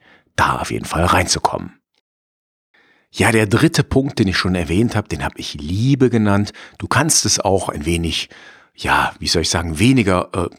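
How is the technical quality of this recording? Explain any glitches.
There is one glitch in the speech, a single tick at 5.26 s, between "schon erwähnt habe den" and "habe ich". It is a bit error spike: one sample had a bit flipped, jumping to about -18 dBFS and straight back. It sounds like a sharp, full-band tick unrelated to the voice. Because it lasts one sample with no gap or level change around it, it differs from a dropout click.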